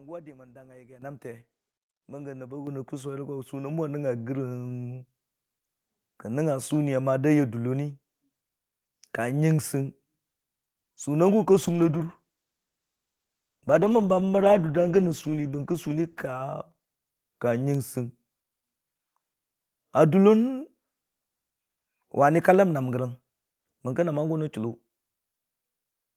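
At 1.02 s and again at 2.67 s, just after "nəb a", the microphone volume is stepped up, by about 11 dB and then about 7 dB. The background noise jumps along with the speech in a single instant, which marks it as a gain change rather than someone talking louder.

From 11.51 s to 16.49 s, a call bitrate drop from 40 to 13 kbps makes the encoder code coarsely and trim the highs, so the speech turns rough and muffled for nearly 5 seconds. There are no gaps or dropouts, which separates this from packet loss.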